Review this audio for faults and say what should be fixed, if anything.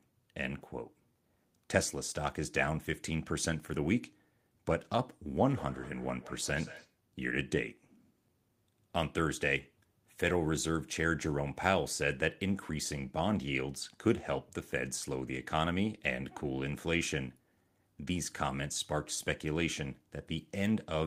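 From 5.34 to 6.99 s the speech returns as thin, ringing repeats roughly every fifth of a second, about 17 dB below the direct sound. This is feedback echo between two devices. Another device in the room plays back this microphone's signal, and the microphone picks it up again. The local echo canceller cannot remove audio that a different device plays. Muting the second device's speaker or using headphones prevents it.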